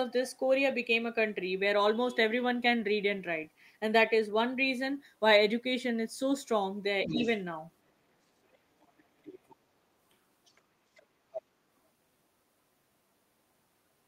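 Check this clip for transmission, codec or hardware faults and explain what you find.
Two echo-path faults stand out, both tied to the far end of the call.

Other side's voice leaking through, at 7.03–7.37, 8.52–8.58, 8.81–9.04, 9.24–9.55, 10.45–10.61, 10.95–11.06 and 11.32–11.42 s. A second voice surfaces in short scraps. The loudest, near 7.1 and 11.4 s, sit about 10 dB under the talker, and others sit lower, from about 20 down to 40 dB under. The likely cause is loudspeaker playback that the echo canceller failed to fully subtract from the microphone.

Speech suppressed in double talk, 7.07–7.24 s, overlapping the first leak. The talker's level sags by a few dB for about 150 ms while both sides are active. The likely cause is the canceller attenuating the whole signal because it could not separate near-end speech from the echo.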